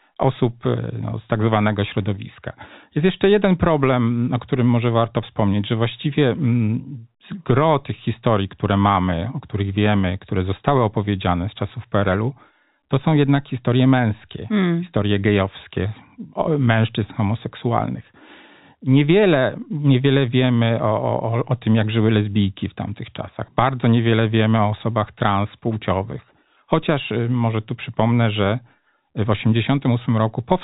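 No technical faults are audible.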